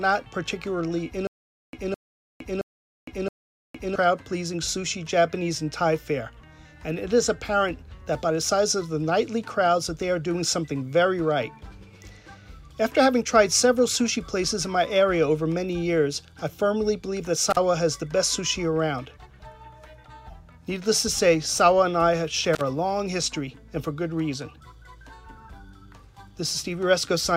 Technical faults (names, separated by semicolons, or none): stutter with silent gaps; intermittent contact